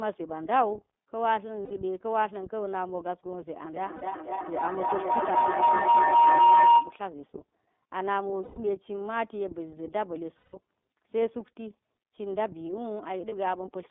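Throughout, the iLBC codec limits the sound to a narrow 200 Hz to 3.5 kHz band. It gives the speech a slightly rough, synthetic edge, fitting its 13.33 kbps mode with 30 ms frames, not the muffled smear of a low-bitrate wideband codec.

Lost iLBC frames first appear at 1.65 to 1.71 s, where a short buzzy held vowel fills the gap. Unlike a dropout's silence or clicks, the speech recovers instantly afterward.

From 3.64 to 7.05 s a feedback howl builds near 1 kHz, with repeats roughly every 0.3 s, peaking about 11 dB above the speech. It grows rather than decaying like an echo, which marks a loop between two devices gaining level on each pass. Inside it, another lost-frame gap falls at 3.96 to 4.03 s.

Further lost iLBC frames come at 8.43 to 8.58 s and 10.38 to 10.56 s, each a longer, fading breathy hum, and briefly at 13.28 to 13.33 s.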